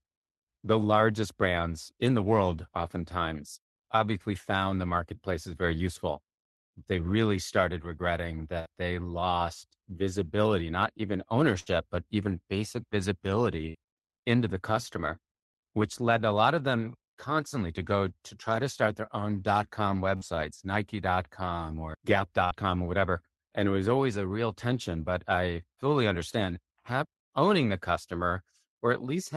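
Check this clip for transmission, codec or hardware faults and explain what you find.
The clip has one kind of fault, repeated five times: burst of packet loss in a speech recording carried over a call codec.

Burst of packet loss at 8.59–8.69 s (after "really started regretting"), 11.60–11.69 s, 13.69–13.77 s (before "into the customer which"), 20.16–20.36 s (after "their own dot com") and 22.45–22.54 s. Roughly 60 ms of audio never arrived each time. The receiver stretched the last sound over about 50–65 ms, fading it as a brief buzz or hiss, then jumped ahead.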